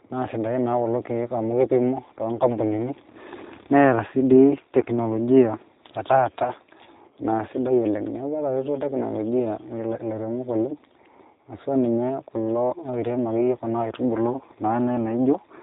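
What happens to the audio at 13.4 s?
At 13.4 s the speech carries G.729 codec damage, present across the whole clip. The coder rebuilds speech from a vocal tract filter, a pitch predictor and a few pulses per frame. Nothing above 4 kHz survives. The result sounds plainly rough and synthetic, which fits an 8 kbit/s stream.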